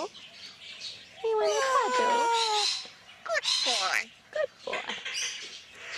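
No technical faults are audible.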